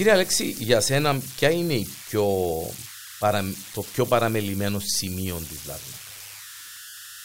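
Speech runs through the whole clip with converter idle tones underneath it. A whistle sits around 1.5 kHz, about 15 dB below the speech. It comes from an undithered delta-sigma converter. Its small input locks into repeating bit patterns, and these produce steady tones and grainy noise.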